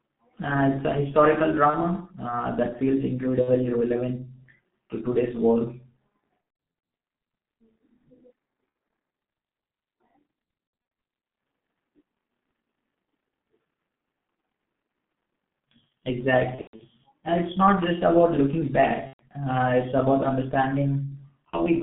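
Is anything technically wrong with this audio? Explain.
Yes. Two faults are audible.

Throughout, the G.723.1 codec at 6.3 kbit/s squeezes the speech into a 150 Hz–3.4 kHz line band. Its slow-updating 30 ms frames leave the speech muffled, hoarse and smeared. A spectrogram shows nothing above 3.4 kHz.

VoIP packet loss concealed by the speech codec occurs at 1.70, 3.41, 6.41–6.83, 8.69, 10.67–10.91, 16.55–16.81, 19.07–19.22 and 21.51 s. The decoder extrapolates pitch and filter across the gaps, which last 30–120 ms (scattered over 420 ms near 6.4 s). The result is buzzy, fading tones with weak recovery. These appear as flat, smeared harmonics and dipping waveform envelopes.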